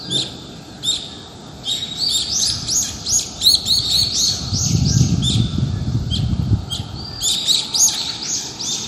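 Throughout, the audio was likely squeezed through MP2 compression at a low bitrate, consistent with about 64 kbps. Starved sub-bands switch off and the surviving bands are coarsely quantised, so the sound is dull, with nothing above 15.9 kHz, and carries a plainly audible gurgling, granular roughness.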